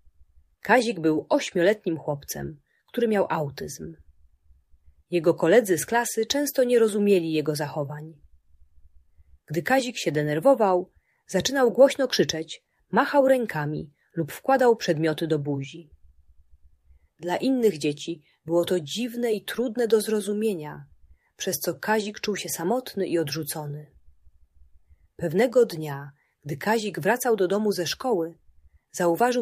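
No technical faults can be heard anywhere in the recording. The sound carries on without any interruption or disturbance.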